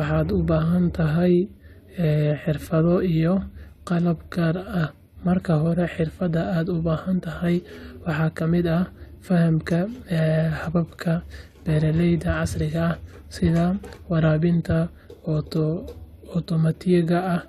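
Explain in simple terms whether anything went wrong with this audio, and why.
Nothing went wrong here: the speech comes across steadily the whole way, with no dropouts, glitches or sudden changes to point to.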